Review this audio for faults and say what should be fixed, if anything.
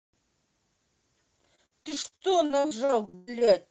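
Repeated packet loss (robotic sound) hits the speech from 1.55 to 3.49 s. Twenty separate dropouts, the longest 119 ms, are each patched by stretching the sound just before it, so about a third of that stretch is concealment. It is heard as choppy syllables with pieces missing. Enabling forward error correction in the call codec and giving the jitter buffer more adaptive headroom would prevent it.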